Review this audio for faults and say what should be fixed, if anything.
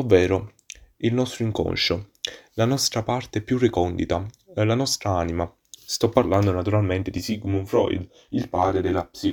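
Channel delay (comb filtering) runs from 7.18 s, just after "parlando naturalmente di", to the end at 9.32 s. One channel arrives around 20 ms behind the other, and when the pair is folded to mono the shared speech cancels at regularly spaced frequencies, starting very low, near 20 Hz. The result is a rough, slightly doubled sound for the rest of the clip. Re-align the channels, or check mono compatibility and timing between channels before summing, so neither side lags.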